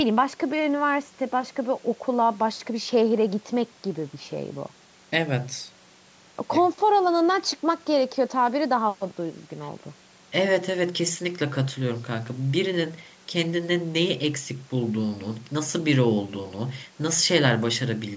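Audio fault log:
Nothing to log here: the speech just carries the usual mark of a call microphone path, with the lowest bass trimmed and nothing above 8 kHz, which is how that processing normally sounds.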